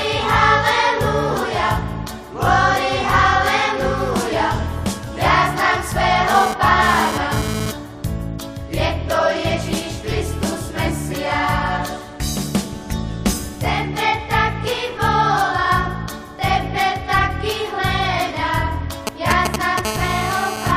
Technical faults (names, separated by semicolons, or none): compressed frames skipped; GSM phone buzz; GSM signalling bursts